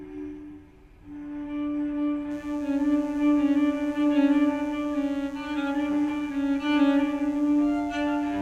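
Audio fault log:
2.31–8.42 s: mains buzz, a steady raspy buzz built on 60 Hz harmonics reaching several kHz, from switching spikes twice per cycle, roughly 30 dB below the signal.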